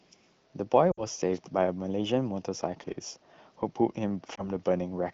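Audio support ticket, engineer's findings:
Lost AMR speech frames, 0.91–1.03 s and 4.36–4.49 s. First gap: speech smears and fades, consistent with about three consecutive 20 ms frames failing checksum. The AMR-WB decoder repeats the last good pitch and vocal tract settings with decaying gain, fading faster than narrowband would. Second gap: brief dip or warble, fits a single lost frame. Probable component: radio link upstream of the decoder, delivering frames that fail their checksum. The AMR-WB HD Voice codec itself sounds consistent with around 15.85 kbit/s, with light coding colour.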